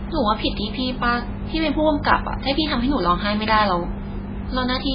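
Throughout, heavy MP3 compression, likely from a very low bitrate: the treble stops near 5 kHz, and flickering weak bands give a watery swirl, unlike plain low-pass dullness.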